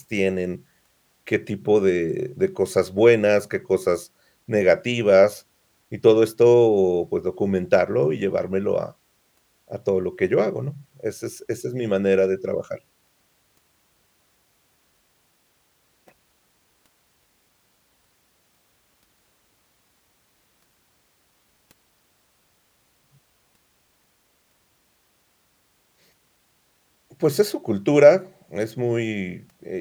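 No technical faults can be heard anywhere in the recording. Nothing in the audio calls for a timestamp or a closer look.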